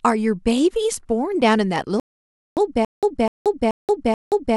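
At 2.00 s the speech cuts to silence, a rebuffering stall. Playback likely ran out of downloaded data. It resumes at 2.57 s exactly where it stopped, adding 0.57 s.

From 2.85 s to the end, a stutter with silent gaps appears. A 0.25 s fragment repeats four times, each followed by 0.18 s of digital silence. This is likely a stalled stream replaying its last chunk, and the intervening speech is lost.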